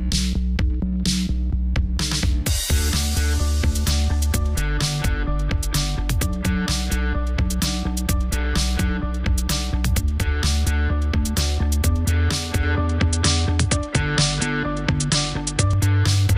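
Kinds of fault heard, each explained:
Input switched to a poorer device: from 12.63 s to 15.73 s the sound loses its top end, with nothing above 10.5 kHz, and a faint new background noise sits far beneath the signal. The change comes with no gap and no real jump in level before the fuller sound returns. The likely cause is the recording input changing mid-take to a different, narrower-band microphone or headset profile, which brings its own tone and noise floor.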